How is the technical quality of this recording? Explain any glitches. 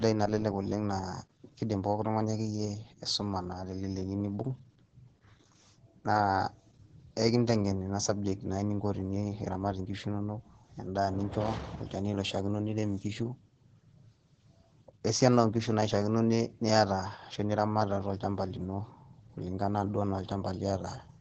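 The quality's pretty rough, held back by one fault running the whole way through. It's Opus voice compression throughout, from start to finish. The SILK coder is working at what sounds like about 10 kbps, cutting everything above 8.5 kHz and coding the excitation coarsely. That leaves the speech muffled, hoarse and a bit robotic, with heavy codec damage across the clip.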